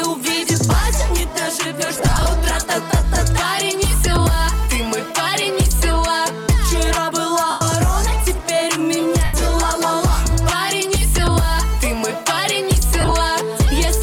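Four bursts of lost LE Audio frames break up the audio, at 1.97–2.26 s, 7.50–7.61 s, 9.25–9.34 s and 13.01–13.12 s. In each, the LC3 decoder covers the gap by replaying the last good spectrum with scrambled signs, so tonal content turns into a brief noisy smear, with the longer runs fading. The first burst is patchy, about 160 ms lost across 285 ms in short runs of around 20 ms. The last scatters 75 ms over about 105 ms, with its longest run near 30 ms. On a spectrogram these appear as short blurred columns where harmonic lines dissolve into broadband texture. On the waveform they show as noise-like stretches with sagging envelopes. The light codec compression underneath leaves only faint traces.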